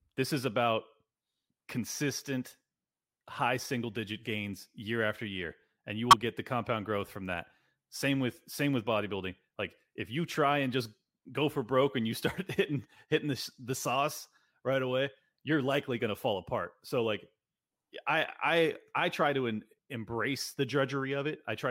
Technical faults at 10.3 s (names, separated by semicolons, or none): corrupt frame decoded